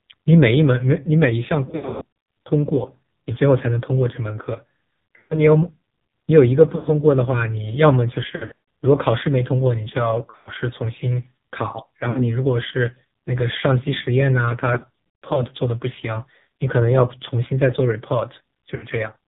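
The whole clip of speech passes through the AMR narrowband mobile codec. Nothing above 4 kHz survives, so the voice sounds thin and boxed in. The damage is heavy. The voice is buzzy and synthetic, which points to one of the lowest AMR rates, around 6 kbps. At that rate the codec rebuilds each sound from a crude vocal tract model and a few pulses. Little real detail gets through.

On top of this come lost AMR speech frames. Radio errors spoil frames, and the decoder fills each gap by repeating its last good settings at falling gain. The first cluster runs from 1.66 to 2.06 s, with about 0.34 s lost across 0.6 s. It sounds broken and warbly. Short dips follow at 5.18 to 5.41 s and 6.76 to 6.86 s. A longer scattered cluster runs from 8.36 to 8.58 s, with runs up to 0.14 s smearing and fading. Another runs from 10.30 to 10.50 s. There is a brief dip at 12.10 to 12.23 s. The longest stretch, 14.74 to 15.45 s, loses about 0.32 s with runs up to 0.14 s. 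A last short dip comes at 18.76 to 18.87 s.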